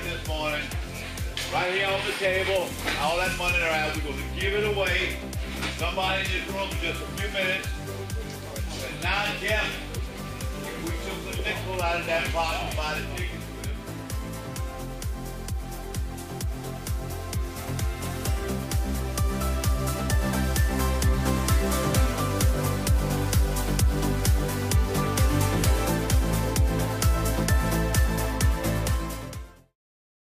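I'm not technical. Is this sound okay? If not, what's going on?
Yes, the sound is in good technical shape, and the gentle drop in level near the end, a smooth fade out starting around 28.5 seconds and finished by 29.77 seconds, is a normal editing touch rather than a problem.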